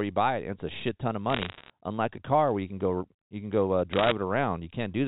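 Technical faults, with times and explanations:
1.3–1.7 s and 3.93–4.12 s, bit errors on a digital phone line: sharp ticks and a brief crackle sit over the speech, first between "a shit ton of" and "unlike a car where", then just after "you can go uh". Each flipped bit corrupts a single 8-bit mu-law sample. Hits on the sign or upper bits throw that sample far off, producing a click. The second burst sounds denser, roughly one error per hundred bits, against somewhat under that earlier.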